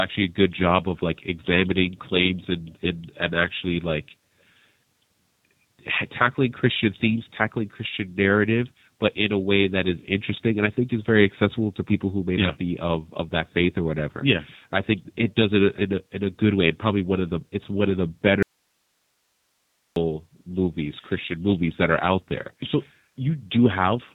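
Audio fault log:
Throughout, G.729 codec. The speech has been squeezed through a low-bitrate VoIP codec that rebuilds each 10 ms frame from a vocal tract filter, a pitch predictor and a few pulses. Nothing above about 3.8 kHz survives, so the sound is dull and boxed in. The codec damage is plainly audible. Voices come out slightly rough and synthetic. This fits an 8 kbit/s stream.
18.43 to 19.96 s, audio dropout to a faint residue. The speech cuts out abruptly for about 1.5 s and then returns just as suddenly. The gap is not silent. It holds only hiss, roughly 50 dB below the speech level. The likely cause is the wanted signal being lost upstream while the path after the break stayed live, so its own noise carried on. The hard edges set it apart from a natural pause or fade.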